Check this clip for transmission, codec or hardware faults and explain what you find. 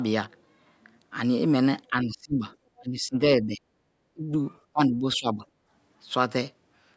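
The speech sags and partly drops out at 1.90–2.42 s, 2.79–3.21 s, 3.41–3.60 s, 4.14–4.34 s and 4.73–5.42 s, sinking by roughly 15 to 25 dB. This is likely speech suppressed in double talk: with both sides talking at once, the echo canceller couldn't separate the talker from the loudspeaker echo and turned both down. The call's microphone processing, which is working normally, leaves nothing above 8 kHz.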